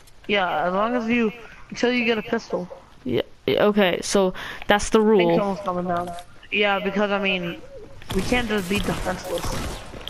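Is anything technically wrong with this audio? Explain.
No, nothing technically wrong turns up on listening; no fault is audible anywhere in the clip.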